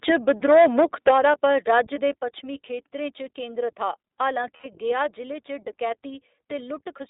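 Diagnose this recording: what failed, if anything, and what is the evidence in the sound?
The whole clip is band-limited to roughly 300 Hz–3.7 kHz, with a slightly rough, synthetic grain on every syllable. This is the iLBC codec at work. It is a narrowband VoIP codec coding 20 ms frames independently, and the clarity fits its 15.2 kbps mode.

From 0.08 to 1.8 s, the loudest peaks carry a harsh, crackling edge, ending just before "दे पच्छमी". This is microphone overload at the converter stage, likely from input gain set too high. The signal ran about 9 dB past full scale, so a noticeable share of peak tops were flattened.

Two brief buzzy, held-vowel patches appear at 0.40–0.43 s and at 1.94–1.97 s just before "दे पच्छमी". A longer 80 ms one falls at 4.56–4.67 s between "केंद्रत हा हालां" and "गया जि'ले च". These are lost iLBC frames from network packet loss. The decoder repeated the last pitch cycle with noise, then recovered immediately.

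At 1.11 s, the sound and background drop abruptly by about 7 dB, in the middle of the distorted stretch. This is the microphone volume stepped down, most likely by call processing reacting to clipping and lowering the device input gain in a single step rather than gradually.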